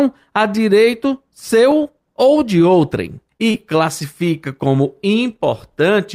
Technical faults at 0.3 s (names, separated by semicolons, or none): none